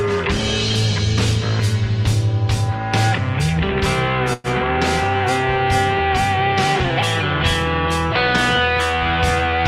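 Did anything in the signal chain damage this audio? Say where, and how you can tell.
Yes, at the network stage. From 4.33 to 4.47 s the sound stalls and is carried on as a fading buzz for about 106 ms, then resumes exactly where it stopped, with everything after it pushed about 106 ms later. This is a call audio freeze, likely from packets held up in transit until the jitter buffer ran dry and the receiver padded the wait with a continuation of the last sound. Unlike a packet-loss dropout, nothing is cut out and nothing goes silent; the audio is only delayed.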